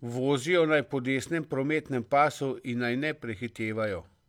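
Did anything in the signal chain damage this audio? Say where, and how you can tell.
No, nothing in this speech recording stood out on listening as damage from any stage of the signal chain.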